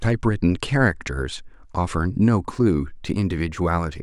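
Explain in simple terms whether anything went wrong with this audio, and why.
From about 2.54 s to the end at 4.03 s, the converter's timing clock wobbles, so each sample is taken about a microsecond and a half too early or late. This is sample clock jitter, heard as a faint hiss or roughness riding on louder, brighter speech.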